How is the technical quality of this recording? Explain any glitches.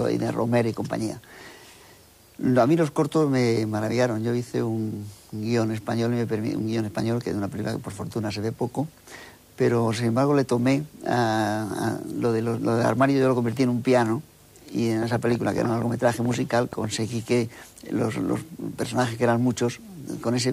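The recording has one clear glitch, a train of clicks from 15.03 to 16.85 s. Over that stretch about ten sharp ticks sit on top of the audio, arriving at roughly 6.05 per second but unevenly spaced. Each pop has much the same brief, hard-edged shape and stands well above the surrounding sound. The likely cause is an external source repeatedly injecting short pulses into the signal path, such as electrical interference from nearby equipment or a faulty connection or power supply.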